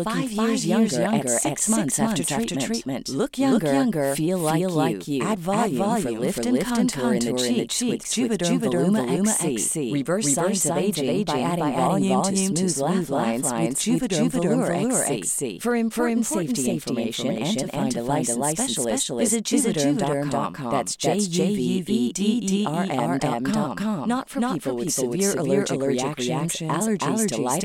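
From start to finish, the speech carries a doubled audio track: a second, full-band copy trails the original by roughly a third of a second at about the same level, likely from the signal being captured twice through paths of different latency. Every syllable is answered by a crisp, dry repeat with no room tail. On a spectrogram, each speech pattern appears twice, side by side; the waveform shows matching envelopes offset by a constant gap.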